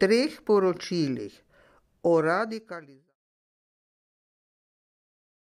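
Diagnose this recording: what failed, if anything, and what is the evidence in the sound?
Nothing failed in this recording; the smooth fade-out of the speech, from around 1.5 s to 3.16 s, is an editing move, not a fault.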